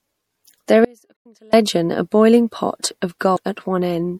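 Throughout the speech there is a watery, swirling quality, with treble cut short, chirpy sibilants and smeared attacks. This is likely MP3 compression, which fits a bitrate around 64 kbps: short of bits, the encoder drops high frequencies and lets weak components flicker between frames.

From 0.85 to 1.53 s the sound cuts abruptly to a faint residue, roughly 35 dB below the normal level, then returns just as suddenly. This is an audio dropout to a faint residue, likely from the wanted signal being lost while the path after the break stayed live and leaked only a trace.

Inside that gap, from 1.14 to 1.26 s, and again at 3.34 to 3.38 s, there are brief glitches. This is damaged data in a compressed stream: the decoder misread corrupted frames, lost sync and jumped to the next frame header.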